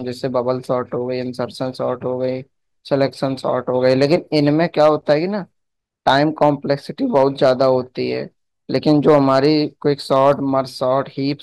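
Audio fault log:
2.94–3.04 s, 3.85–5.13 s, 6.07–6.49 s, 7.16–7.70 s, 8.75–9.46 s, 10.12–10.31 s: hard clipping. Speech peaks overshoot the ceiling by about 1 dB at first, then about 3 to 5 dB, and are cut flat. Unlike soft clipping's rounded warmth, those sharp corners spray high harmonics, heard as brittle crackle and fuzz.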